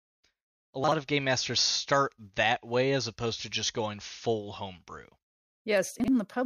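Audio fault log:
0.84–0.92 s and 6.0–6.08 s, chunks out of order: in each spot a 40 ms block of audio was delivered one block late, so it plays after the block that should follow it. No audio is lost, but the two 40 ms pieces swap places, leaving three abrupt joins within 80 ms. Each spot sounds like a brief jumbled stutter, the first just before "of game masters start".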